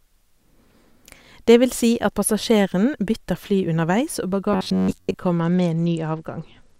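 Right after "underveis og", from 4.53 to 5.15 s, the speech turns into a stiff metallic buzz at about 94 Hz. That's robotic sound from repeated short buffers. Audio likely arrived too slowly, so roughly a 10.7 ms chunk was looped for most of that stretch while fresh material was skipped.

From 5.36 s to the end, the treble goes dull and a gritty grain creeps in. That's a Bluetooth SBC bit pool drop. The link was squeezed, and the thin, coarse sound fits the bit pool falling from 28 to 11, around 90 kbps, which leaves the upper sub-bands starved.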